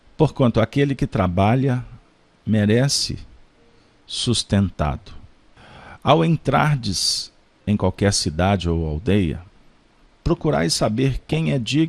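From the start, the audio has a dull, band-limited character with a granular, gurgling roughness, most likely from MP2 compression at a low rate, which fits a bitrate around 80 kbps. MPEG Layer II divides the spectrum into 32 equal sub-bands. Starved of bits, the encoder shuts off upper bands and coarsely quantises the rest. On a spectrogram this shows as a ragged upper edge where high bands blink in and out, with blocky patches in the bands that remain.

Between 11.20 and 11.37 s, DAB burbling breaks in as a brief burst of burbling. Bit errors, at a rate of about half a percent, slipped past error correction into the MP2 data. Corrupted samples put short blips of noise in single sub-bands. Around ten frames were hit. A spectrogram shows isolated horizontal band-shaped bursts flaring and vanishing.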